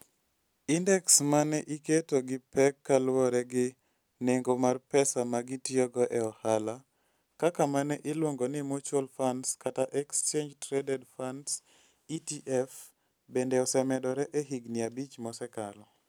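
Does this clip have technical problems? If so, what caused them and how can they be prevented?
No, this clip has no technical problems, so there is nothing to trace to a cause or prevent.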